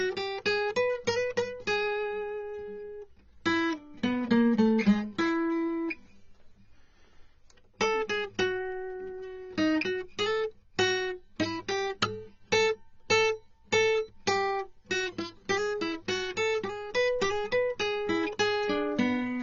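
Throughout the music, transcoding between lossy codecs: nothing above 7.4 kHz, and two layered sets of codec artefacts rather than one, likely AAC-LC re-encoded as HE-AAC.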